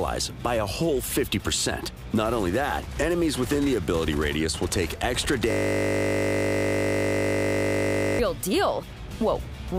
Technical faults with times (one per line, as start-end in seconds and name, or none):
5.51-8.19 system hang loop